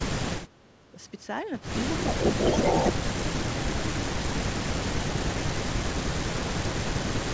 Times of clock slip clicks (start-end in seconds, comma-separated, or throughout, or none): none